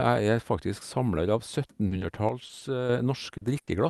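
Short concealed packet loss first appears at 1.87 to 1.93 s and again at 1.99 to 2.03 s. Brief stretches of the speech, 40 ms and then 20 ms, arrived too late and were filled by extending the preceding sound, giving a quick smear or wobble rather than an audible gap.

From 2.29 to 2.89 s the speech drops abruptly by about 6 dB and then returns just as suddenly. The likely cause is one stereo channel dropping out before the mono sum. Unlike the loss events, nothing smears or goes missing, and the sound is simply quieter for that stretch.

Inside that quieter stretch, two more 20 ms concealments at 2.47 to 2.51 s and 2.59 to 2.63 s add small wobbles. A 40 ms one at 3.37 to 3.43 s follows. Each is short enough to register as a blip, not a held sound.

A burst of packet loss at 3.61 to 3.69 s is longer, about 60 ms. Here the receiver keeps the last sound going while turning it down, so it becomes a fading buzz or hiss. 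The speech then resumes further on with that part missing, which sets it apart from the brief concealments.

The Opus call path is audible only as codec coding noise and a high-frequency cut-off at 12 kHz, at a bitrate of 40 kbps.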